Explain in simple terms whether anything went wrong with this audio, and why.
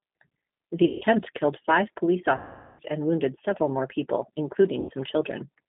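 The speech has been squeezed through the G.729 codec, a low-rate telephone codec that rebuilds the voice from a rough model of the throat and mouth plus a few pulses per short frame. Everything above about 3.7 kHz and below about 150 Hz is gone, so the voice sounds narrow, like an old phone line. The codec's damage is plainly audible: the voice has a rough, slightly synthetic edge throughout.

Three stretches suffer VoIP packet loss concealed by the speech codec. At 0.85 to 1.05 s, just before "killed five police", at 2.37 to 2.82 s, between "killed five police" and "and wounded several more", and at 4.81 to 4.92 s, right after "wounded several more people", chunks of audio never arrived. The decoder filled each gap by stretching the last bit of voice into a fading buzzy tone or coloured noise. The middle gap is the longest at about 0.42 s, and the voice stays weak or blurred briefly after each gap.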